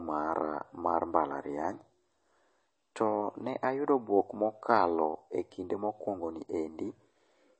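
Likely MP3 compression at a starved bitrate, around 32 kbps, runs throughout the speech: the encoder drops everything above about 8.4 kHz and switches weak frequency lines on and off between frames, leaving dulled sibilants, a plainly audible watery swirl, and smeared consonant attacks.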